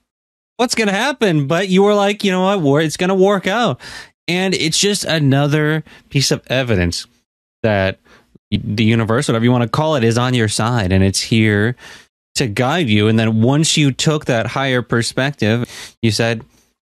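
At 8.55 s, compressed frames are skipped. The decoder drops whole frames, and the speech jumps ahead by roughly 50 ms, which fits two 23.2 ms frames. At 15.63 s, a longer jump of roughly 150 ms follows.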